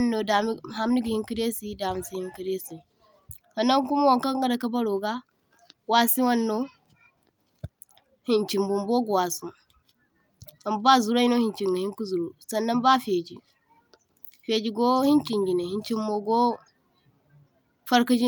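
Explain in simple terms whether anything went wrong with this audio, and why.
Nothing went wrong here: the recorded speech keeps a steady, continuous signal the whole way, with no dropouts, breaks or sudden changes in level to point to.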